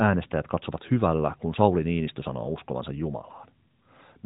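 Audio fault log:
No faults heard anywhere in this speech recording.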